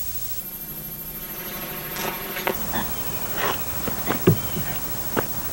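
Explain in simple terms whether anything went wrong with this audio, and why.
From 0.40 to 2.55 s the sound turns into a robotic buzz. This is planar audio read as interleaved. Each 10.88 ms block stores left, then right, but gets read as alternating pairs. The blocks are short, so you hear a 92 Hz buzz instead of an octave jump.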